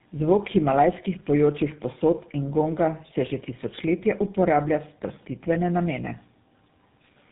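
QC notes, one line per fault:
Throughout: tandem speech coding. The speech sounds like it went through two low-rate speech coders in a row, with a plain telephone-band stage between them. The rough, noisy texture fits GSM full rate applied over earlier AMR-type coding. Each coder works on the previous one's errors, so the damage adds up. The result is rougher, more muffled and more warbly than one pass would give. Nothing remains above 3.8 kHz.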